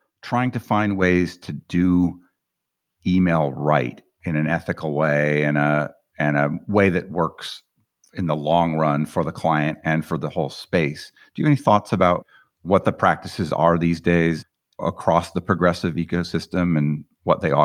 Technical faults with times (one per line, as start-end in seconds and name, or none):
1.02 microphone volume stepped up